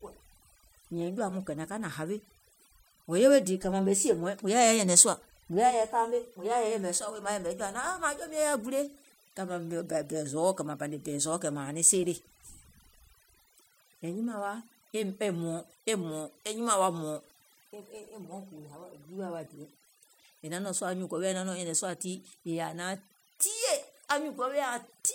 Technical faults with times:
0.00-25.14 overdone noise removal

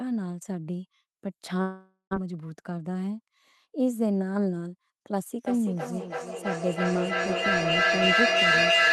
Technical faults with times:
1.61-2.15 long network dropout
2.22-3.02 jitter buffer speed-up
5.47-8.92 feedback echo between two devices

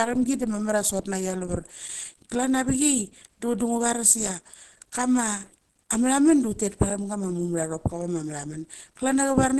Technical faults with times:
0.00-9.60 Opus compression

